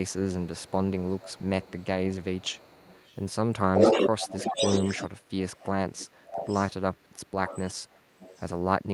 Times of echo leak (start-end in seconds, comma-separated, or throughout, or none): 0.06-0.13, 0.41-3.18, 3.74-8.46